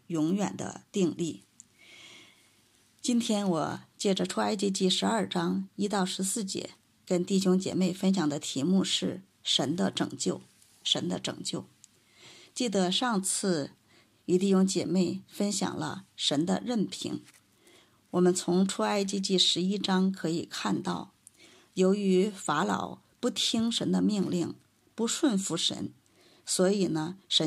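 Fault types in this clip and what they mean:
No technical faults can be heard anywhere in this clip. Nothing in the audio points to a fault of any kind.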